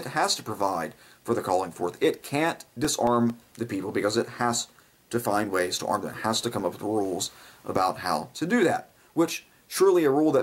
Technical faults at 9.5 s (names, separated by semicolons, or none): none